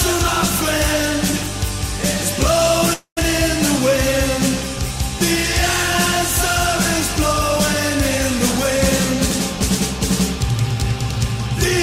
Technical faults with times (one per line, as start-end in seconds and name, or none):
2.93-3.19 long network dropout